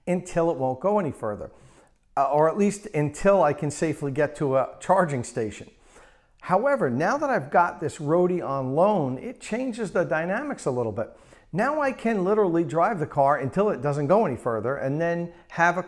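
No technical fault can be heard anywhere in the audio. There is nothing here that needs a time or a cause attached to it.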